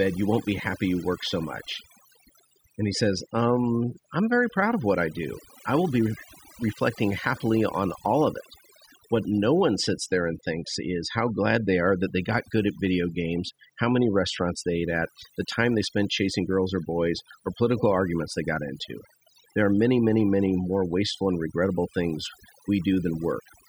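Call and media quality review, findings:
Overdone noise removal, whole clip: background dropped and broken into twinkly specks. Denoiser set too hard, gating quiet speech bands along with the noise.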